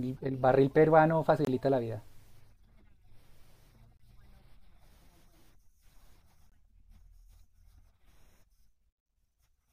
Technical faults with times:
1.45-1.47 gap between chunks
3.97-3.99 gap between chunks
6.49-6.52 gap between chunks

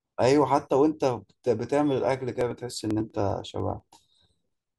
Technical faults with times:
2.41-4.69 periodic USB or driver dropouts

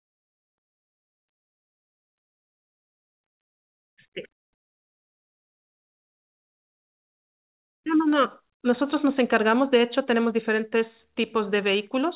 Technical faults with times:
2.45-3.44 repeated stalls (stutter)
7.34-8.11 jitter buffer slow-down
9.55-10.77 jitter buffer speed-up

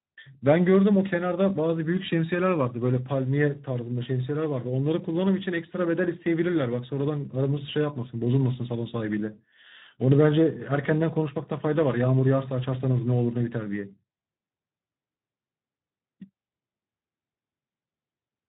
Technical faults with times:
0.00-18.48 Speex codec

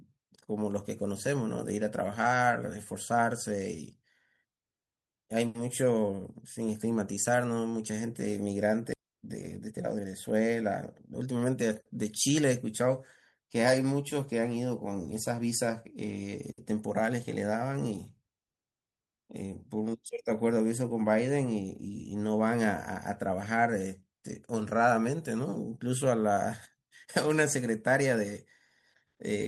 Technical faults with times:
8.93 skip ahead
9.03-10.73 jitter buffer speed-up
11.13-11.70 jitter buffer speed-up

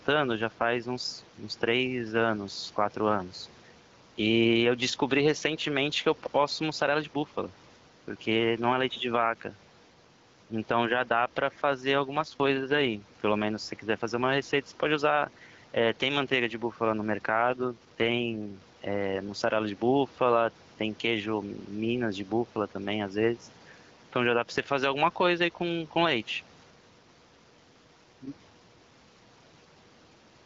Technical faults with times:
0.00-30.45 gain pumping
11.95-13.04 AMR rate drop
17.42-18.62 AMR rate drop

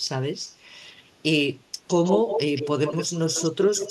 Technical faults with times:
2.04-3.90 echo leak

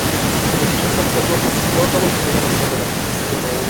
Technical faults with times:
0.00-3.70 echo with no canceller
2.68-3.70 channel delay (doubling)

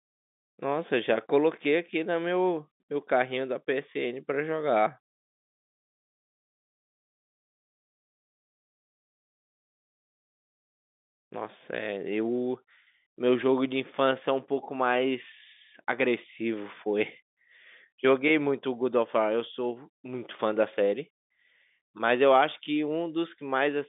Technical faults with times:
none

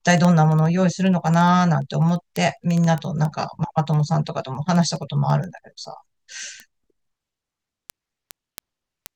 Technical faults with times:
0.11-9.13 word clock ticks

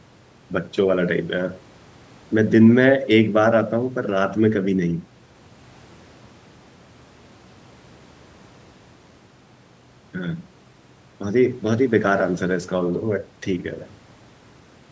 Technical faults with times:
none

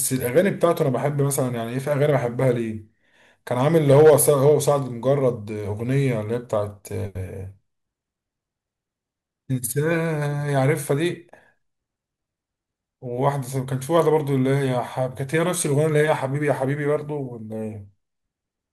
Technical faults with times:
3.90-4.49 hard clipping

